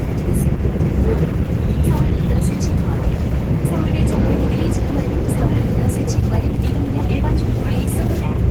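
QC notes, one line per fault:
throughout: Opus compression, plainly audible. The sound is hoarse, grainy and somewhat muffled, likely Opus in its hybrid speech mode, which fits a 16 kbps stream. A spectrogram shows noisy, smeared bands instead of holes, with content reaching 20.2 kHz.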